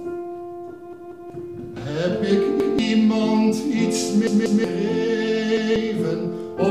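Repeated buffers cause four stutters, at 0.93–1.30 s, 2.60–2.79 s, 4.27–4.64 s and 5.57–5.76 s. Each time a 186 ms chunk, which fits an 8192-sample buffer, replays once or twice with hard joins because fresh audio arrived late, and roughly 0.2–0.4 s of sound goes missing.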